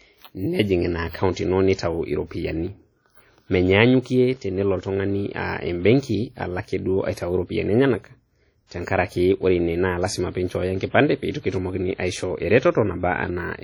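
WMA compression runs through the whole of this speech recording: the audio has a ringing, washy quality with hiss that swells and fades along with the signal, and the heavy damage points to a low bitrate around 32 kbps, likely from a transform codec spreading quantisation noise over long blocks and zeroing weak components. Pre-echo appears from 8.67 to 8.71 s, just before "teng'arake ore": a short hiss of about 47 ms arrives ahead of the sharp onset, because noise sized for the loud attack fills the quiet stretch earlier in the same block, softening that attack.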